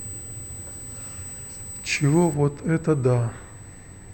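USB whine runs through the whole of this speech clip as a steady, fixed-pitch tone at 8 kHz, sitting only about 15 dB below the signal. A USB bus polls in 125-microsecond microframes, and that regular current draw leaks into the audio through a shared power or ground path, producing a whine at 8 kHz. De-emphasis applied wrongly sets in at 2.34 s and lasts until the end at 4.13 s: the top end rolls off smoothly, reaching about 13 dB down at 10 kHz relative to 1 kHz, so the speech turns dull and muffled. That happens when a treble cut meant to reverse pre-emphasis is applied to audio that never had any boost, or is applied a second time.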